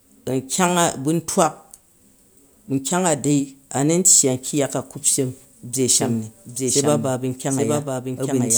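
Speech, with a doubled audio track from 5.90 s to the end: a copy about 5 dB quieter trails roughly 0.7 s behind, starting abruptly with no decay, unlike echo. Likely a second, slower capture path.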